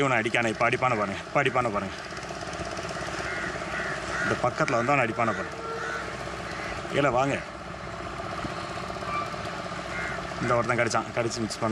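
No technical faults can be heard anywhere in the recording, and the signal stays steady and intact for its whole duration.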